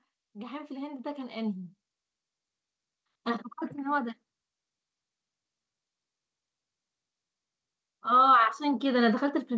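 From 0.2 to 1.77 s, automatic gain rising: the level control judged the input too quiet and raised it by about 8 dB. It recurs from 8.03 s to the end. Background swells with the speech, unlike someone moving closer; the call-path band stops near 8 kHz.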